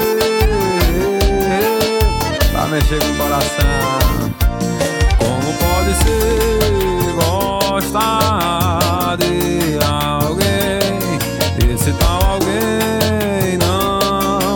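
Nothing here trips the ear at all; the sound carries on steadily without a single glitch, dropout or odd artefact to point to.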